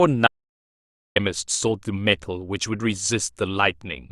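An audio dropout to silence runs from 0.27 to 1.16 s, about 0.89 s of silence with no room tone. The speech cuts off abruptly and resumes mid-flow, likely because the input link or device failed while recording continued writing silence, and whatever was spoken then is lost.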